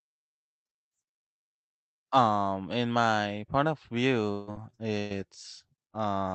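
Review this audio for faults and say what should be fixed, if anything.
Repeated packet loss (robotic sound) runs from 4.31 to 5.13 s, right after "in my point of". Audio is lost in four separate holes, the longest 158 ms, and each is bridged by extending the last sound, so about 43% of that stretch is synthetic fill. The result is choppy. What sets it apart from a single dropout is that the fill repeats in quick succession. It can be prevented by giving the network path more headroom and enabling forward error correction.

Short concealed packet loss appears from 5.90 to 5.97 s. Roughly 40 ms of audio never arrived in time and was patched with a continuation of the preceding sound before blending back into the real signal. It comes through as a brief smear or wobble. Unlike the robotic stretch, it is one isolated gap with nothing following it, so the sound recovers at once instead of staying choppy. 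It can be prevented by a slightly deeper jitter buffer that tolerates late packets.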